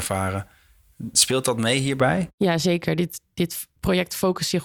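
A speech recording with pre-emphasis left on from 0.0 to 2.0 s. Over that stretch the treble has been lifted, as it would be before recording or transmission, but the complementary de-emphasis was never applied, so 10 kHz sits about 11 dB above 1 kHz. The result is thin, bright and sibilant, with the tilt following a J.17-style curve, and it ends at 2.0 s, where the balance returns to normal.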